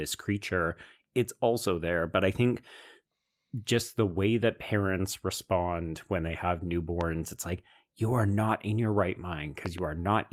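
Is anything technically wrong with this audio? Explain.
Yes. There is a loud pop at 7.01 to 7.03 s and a double pop at 9.66 to 9.80 s, each peaking about 10 dB above the speech. A sudden voltage pulse, likely from a plug, switch or static discharge, adds a thump. Unlike a dropout, the speech continues underneath.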